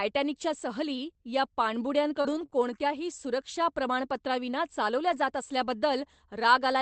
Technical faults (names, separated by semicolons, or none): repeated packet loss (robotic sound); lost packet rebuilt from error correction